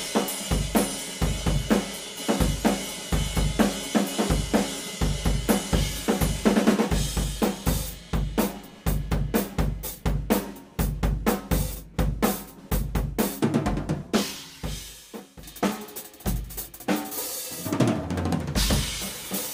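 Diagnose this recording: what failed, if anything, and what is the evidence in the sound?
No failure detected anywhere.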